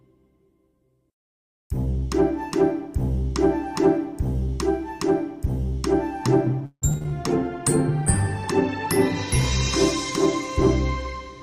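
From 6.65 to 7.12 s the sound turns choppy, with small pieces missing. This is repeated packet loss: five gaps came in quick succession, the longest 164 ms. About 250 ms was patched by stretching out the preceding sound, and about 80 ms was simply lost. Roughly half of this short stretch is concealment rather than real audio.

From 7.28 to 10.58 s the sound becomes rough and watery, losing its brightness and clarity before sharpening again. This is a call bitrate drop. The encoder's rate fell from 48 kbps to 18 kbps and stayed at the lowest level for about 2 s. At that rate Opus has to quantise much more coarsely and trims the upper frequencies, which gives the smeared, muffled texture until the bitrate recovers.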